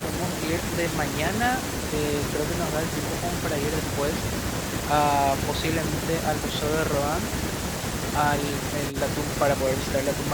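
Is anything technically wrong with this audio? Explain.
No, nothing technically wrong can be heard here.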